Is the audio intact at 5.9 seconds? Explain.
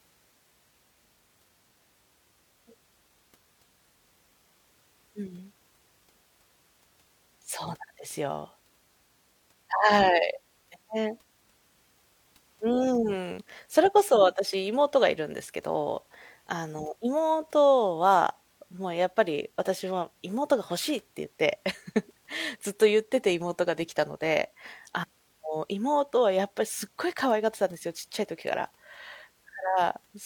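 Yes, at 5.9 seconds the speech plays through intact, with no dropout, click, distortion or other fault at that moment.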